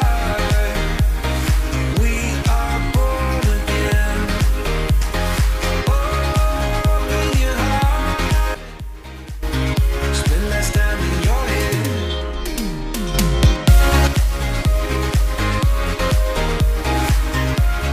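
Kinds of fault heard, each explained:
Sudden gain jump: sound and background noise drop about 14 dB at 8.55–9.43 s, then rise about 6 dB at 13.14–14.07 s, likely from unramped digital gain changes.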